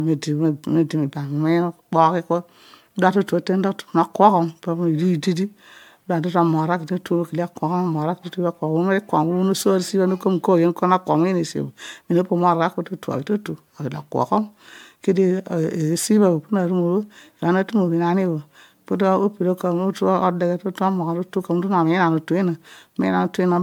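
Speech with generation loss throughout: swirly, hollow and smeared, with blurred consonant attacks, likely from about five successive MP3 passes near 96 kbit/s. Unlike a single low-bitrate encode, the bandwidth still reaches about 20 kHz, yet the smearing is worse.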